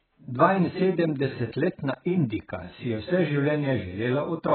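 From start to finish the speech is dull and smeared, with nothing above 4.7 kHz and a watery, warbling texture on vowels and a fizzy edge on sibilants. The likely cause is heavy AAC compression (AAC-LC) at a very low bitrate, around 11 kbps, where the encoder discards the upper band and starves the rest of bits. A spectrogram shows a hard ceiling at 4.7 kHz.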